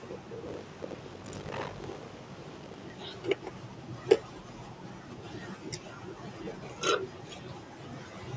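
From 0.46 to 2.92 s there is buffer tearing: the software filling the playback ring buffer and the hardware draining it have drifted out of step, so they cross inside every period. About half of each buffer still holds speech from roughly 70 ms earlier, spliced in with hard joins. The result is a steady robotic rattle at 50 Hz, which fits a 20 ms buffer period. It rides on the speech, whose top end stops near 8 kHz as call microphone processing leaves it.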